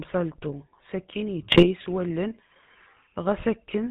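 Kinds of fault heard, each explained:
GSM full-rate codec: throughout, the early 13 kbps mobile codec models the voice with spaced pulses and nothing above 4 kHz, leaving a plainly buzzy, gravelly roughness.
GSM bit errors: from 1.52 to 1.68 s, corrupted filter, pitch and gain values distort a burst of frames, so the speech squawks, pops and gargles briefly.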